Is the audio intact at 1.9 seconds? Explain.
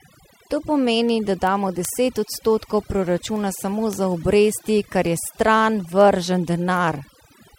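No. Word clock ticks run from 0.15 to 7.52 s, including 1.9 s. An unlocked receiver clock, drifting roughly 100 ppm, drops or repeats single samples about every fifth of a second, producing sharp, uneven ticks. Overdone noise removal is present throughout, including here. Heavy reduction cuts frequency bands near the noise estimate, leaving near-silent, twinkling gaps.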